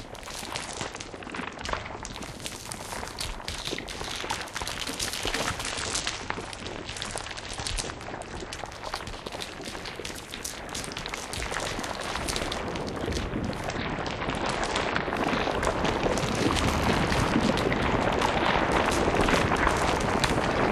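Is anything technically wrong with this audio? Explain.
Yes. There's a Bluetooth SBC bit pool drop three times: 0.52–2.13 s, 5.64–8.55 s and 13.69–15.06 s. The link evidently got congested, so the encoder starved the top sub-bands and coarsened the rest. That fits a bit pool falling from 31 to 11, around 83 kbps. Treble dulls and gritty noise creeps in until it recovers.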